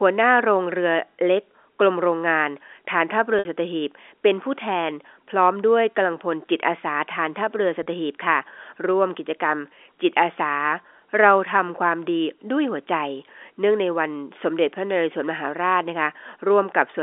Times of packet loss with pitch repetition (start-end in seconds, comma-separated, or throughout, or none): 3.39-3.45, 7.83-7.86